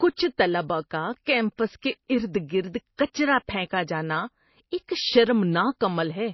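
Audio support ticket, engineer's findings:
Speech band lossy-coded throughout, likely MP3 compression starved of bits. Nothing above about 5.8 kHz, plainly audible watery, swirly texture as weak frequency lines drop in and out between frames. The damage points to a bitrate near 24 kbps.

Pre-echo at 2.97 s, just before "کچرا پھینکا جانا". The transform block spreads its quantisation noise back before a sharp attack, giving a short hiss about 16 ms ahead of the onset and a softened, smeared attack.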